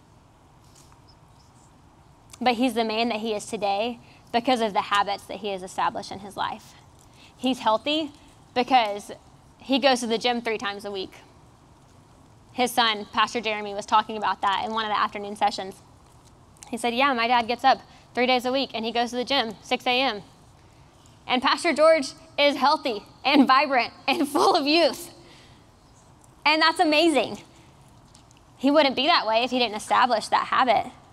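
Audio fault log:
No fault is heard anywhere in this clip. Nothing in the audio calls for a log entry.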